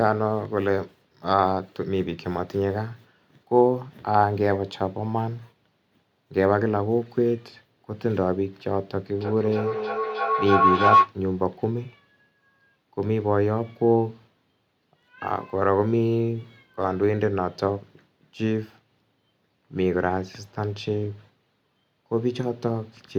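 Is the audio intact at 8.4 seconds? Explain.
Yes, the speech at 8.4 seconds plays through intact, with no dropout, click, distortion or other fault at that moment.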